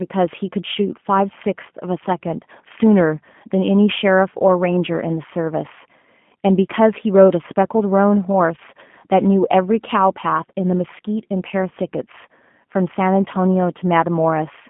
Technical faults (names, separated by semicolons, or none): G.729 codec